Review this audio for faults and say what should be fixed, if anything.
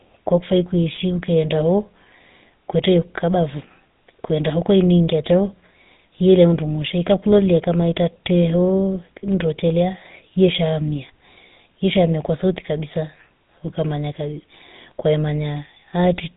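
Buzzy, gravelly roughness coats the speech throughout, with nothing above 4 kHz. This is GSM full-rate codec damage, consistent with a 13 kbps rate. Capture or route the speech over a wideband path instead of a GSM full-rate link.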